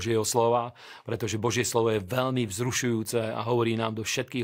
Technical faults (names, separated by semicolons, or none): none